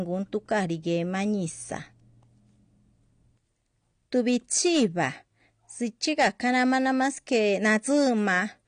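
Speech throughout the clip sounds dull and smeared, with a watery, warbling texture on sustained sounds and a fizzy edge on sibilants. Nothing is present above 9.6 kHz, so the top octave of the voice is simply missing. This is likely AAC compression, specifically AAC-LC. The plainly audible damage and the low cut-off fit a bitrate around 32 kbps, where the encoder drops the highest band and quantises the rest coarsely. From 4.15 to 5.06 s, and again from 6.05 to 8.37 s, the louder parts of the voice break into a gritty crackle on each peak. That is hard clipping, with the signal driven about 5 dB beyond what a stage could pass, so the waveform tops are sliced flat. Those flat tops generate extra high harmonics, which produce the crackle on the peaks through both stretches.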